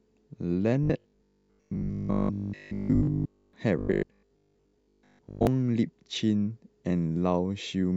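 Speech turns into a rigid, metallic 50 Hz buzz from 0.83 to 3.53 s and again from 3.79 to 5.47 s: robotic sound from repeated short buffers, likely caused by audio arriving too seldom, so a roughly 20 ms slice loops while most real audio is skipped.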